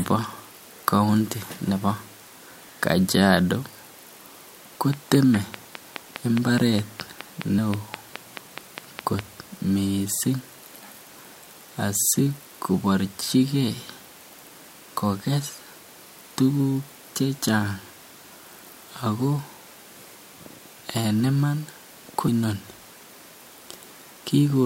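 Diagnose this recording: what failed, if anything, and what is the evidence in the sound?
There's a train of clicks from 4.93 to 9.20 s: about twenty near-identical ticks at a steady 4.8 per second, peaking about 15 dB above the speech and audible in the gaps too. That regular pulse points to the analogue wiring or interface, likely interference from nearby gear or a struggling interface.

You also get audio missing between chunks at 7.58 s and 17.38 s. Roughly 100 ms drops out each time and the two sides butt straight together, so the sound skips forward. It's likely the buffer or recording stage losing a slice when one chunk closes and the next opens.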